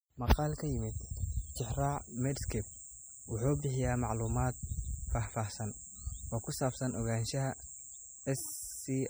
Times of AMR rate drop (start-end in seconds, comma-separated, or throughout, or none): none